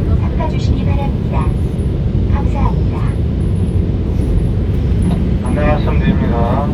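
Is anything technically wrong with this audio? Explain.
Yes. At 0.55, 3.44 and 4.92 s there are single sharp clicks, likely from dropped samples: the stream probably lost a handful of samples, making the waveform jump abruptly.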